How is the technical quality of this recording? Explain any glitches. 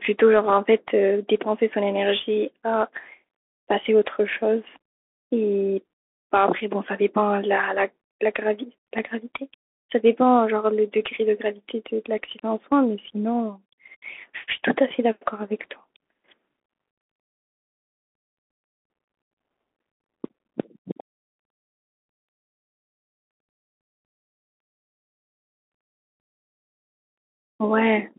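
The recording has audible codec damage from start to finish. Bluetooth CVSD headset codec, throughout: the speech has passed through a narrowband headset link that fits CVSD at 64 kbps. Each sample is coded as a single up-or-down step whose size adapts, so loud, fast-rising sounds outrun the step and distort, s sounds turn scratchy, and a fine granular hiss sits under the speech. The band runs only from 250 Hz to 3.4 kHz, leaving the sound thin and boxy.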